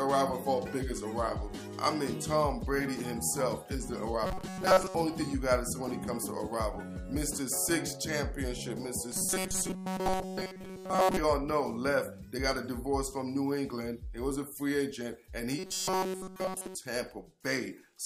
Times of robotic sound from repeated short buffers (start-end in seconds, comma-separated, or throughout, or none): 4.25-4.95, 9.12-11.19, 15.59-16.75